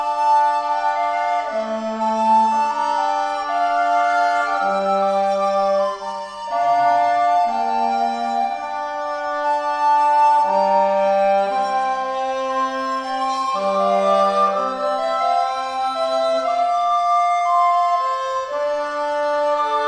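No technical faults can be heard anywhere in the clip. Nothing in the audio calls for a timestamp or a closer look.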